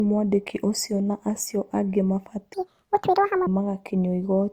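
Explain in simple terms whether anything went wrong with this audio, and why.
The speech was likely passed through one lossy codec and then another, a fault called transcoding between lossy codecs, so the compression artefacts of both are heard layered together throughout.

From 2.54 to 3.47 s, a section at the wrong speed plays almost twice as fast, likely from a wrong clock. The speech turns hurried and jumps much higher in pitch.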